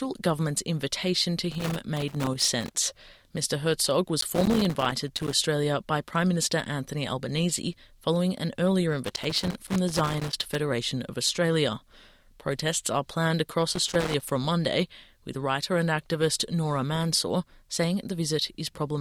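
Loose connector crackle breaks out four times, from 1.52 to 2.74 s, 4.20 to 5.33 s, 9.05 to 10.55 s and 13.73 to 14.31 s. A worn or dirty contact keeps making and breaking, chopping the signal into ragged scratchy bursts. Unlike regular digital clicks or steady vinyl crackle, each episode comes in a cluster lasting about half a second to one and a half seconds, with random spacing inside, then stops.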